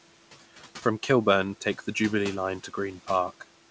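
Throughout, background noise sinks in the pauses and rises under the speech: noise suppressor artifacts, pulling noise-dominated bands down by about 12 dB frame by frame.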